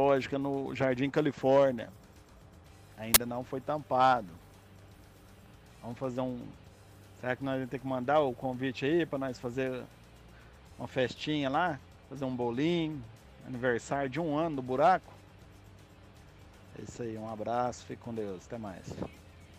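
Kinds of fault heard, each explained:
Uninitialised buffer: at 3.14 s a short, very loud burst of harsh digital noise cuts through the sound for about 20 ms and stops just as abruptly. A playback buffer was sent to the output before any audio had been written into it, so whatever stale data sat in that memory was played as if it were samples. The burst's length points to one block of about 20 ms being read this way.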